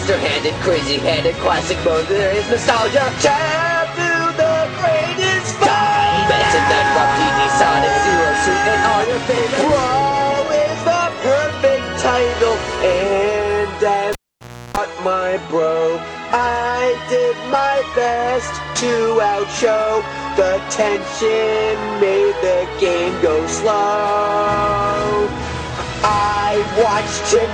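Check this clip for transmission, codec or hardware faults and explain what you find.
One fault is audible: a cable pulled and plugged in, from 14.13 to 14.77 s. A pop drops the sound to near silence for 0.60 s, including 0.34 s of 60 Hz mains buzz, then a second pop as the sound returns. A live lead was pulled out and pushed back in, and its tip picked up hum while it made partial contact.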